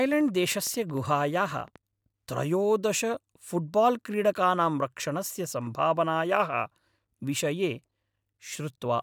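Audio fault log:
0.06–1.77 s, train of clicks: Something in the chain, likely electrical interference from nearby equipment or a faulty connection or power supply, is injecting a short pulse into the signal at a steady rate of about 12.9 per second. Around twenty clicks of much the same shape land evenly spaced, peaking roughly as loud as the speech itself, so they read as a regular ticking laid over the voice. The ticking stops just before "त्रयोदश फुट्बाल्क्रीडकानां रक्षणस्य सम्भावनायाः".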